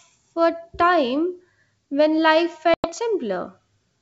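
At 2.74 s the speech drops out abruptly, showing packet loss on an ADPCM call. About 100 ms of audio, roughly five packets, was lost and filled with silence, so the waveform shows a flat, hard-edged gap and the spectrogram a clean blank column until 2.89 s. When sound resumes, the decoder's adaptive predictor and step size no longer match the sender's. The restart comes in with brief, slight distortion until the decoder re-syncs within some tens of milliseconds. The G.722 coding at 64 kbit/s carries the speech up to 7 kHz.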